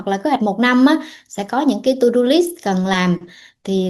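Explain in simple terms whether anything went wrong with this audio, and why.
The speech briefly jumps ahead at 0.35 s and 2.93 s. These are compressed frames skipped: a few 20 ms chunks were never played.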